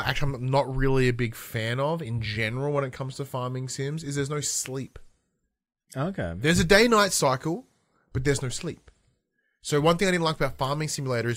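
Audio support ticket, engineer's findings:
No faults found on listening; speech audio runs without audible defect, no component implicated, ticket can close with no action.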